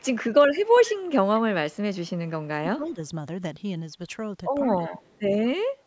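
A faint delayed copy of the speech trails about 157 ms behind at 0.00–0.08 s, 0.54–2.12 s, 2.85–2.91 s and 4.66–5.20 s, sitting roughly 20 to 35 dB under the voice. That's echo leak, likely an echo canceller letting loudspeaker pickup slip back. Speech also dips by around 15 to 20 dB at 2.65–2.99 s, 4.78–4.97 s and 5.38–5.60 s. That's speech suppressed in double talk, likely the canceller ducking the talker along with the echo.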